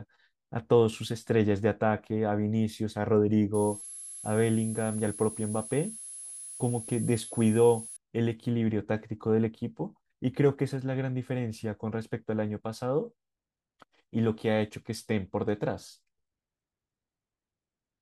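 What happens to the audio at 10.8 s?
Nothing goes wrong at 10.8 s; the speech carries on intact, with no dropout, click, distortion or other fault at that point.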